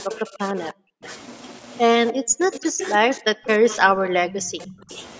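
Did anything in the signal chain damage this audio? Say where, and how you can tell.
Yes. Echo leak in call processing: a copy trails 295 ms behind, about 20 dB down, at 0.00–1.16, 3.46–3.80 and 4.36–4.96 s, and about 10 dB down at 2.53–2.89 s. A loudspeaker echo canceller likely let it through.

Speech suppressed in double talk, 0.06–1.03 and 2.12–4.91 s. The speech drops by as much as about 40 dB in pieces. The echo canceller likely turned down both its own talker and the loudspeaker echo.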